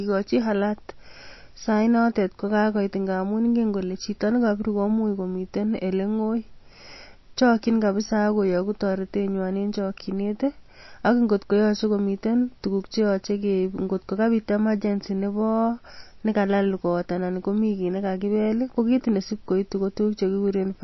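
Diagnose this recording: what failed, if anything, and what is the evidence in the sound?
The codec stage is the likely culprit: the audio appears to have passed through MP3 compression at a starved bitrate. For its whole length the speech has nothing above 5.8 kHz, a hard treble ceiling that fits an encoder around 27 kbps discarding the top band to save bits. The damage is plainly audible. Weak frequency lines drop in and out between frames, giving a watery, swirling texture, with chirpy s sounds and softened attacks.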